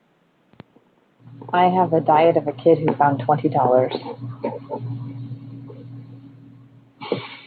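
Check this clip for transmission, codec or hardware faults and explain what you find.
No transmission, codec or hardware fault is audible in the speech, and the faint room noise sitting about 41 dB below it belongs to the recording environment.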